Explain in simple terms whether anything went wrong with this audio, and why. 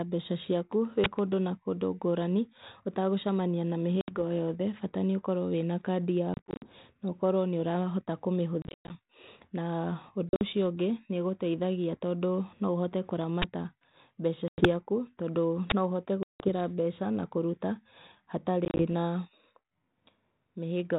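Yes, two kinds of fault can be heard in this speech.

An uninitialised buffer causes the two brief, very loud bursts of harsh digital noise, at 1.04 to 1.06 s and at 15.7 to 15.72 s. Each lasts about 20 milliseconds. A block of audio was played before any sound had been written into it, so leftover memory came out as noise. This is a sudden blast, not a gap.

Packet loss on an ADPCM call is the opposite: abrupt holes of silence, at 4.01, 6.34, 8.62, 10.29, 14.48, 16.23 and 18.65 s. Each hole lasts from under a tenth of a second to about a fifth. Some are single gaps, while at 6.34, 8.62, 10.29 and 18.65 s they are broken into short runs. After each gap the speech returns with a click, a jump in loudness or brief roughness before it settles. That happens because the receiving phone's decoder lost track of the sender while the audio was missing. A buffer burst has no such recovery afterwards.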